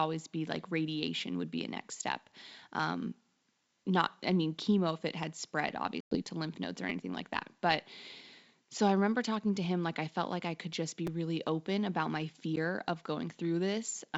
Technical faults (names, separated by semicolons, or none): repeated buffer; packet loss on an ADPCM call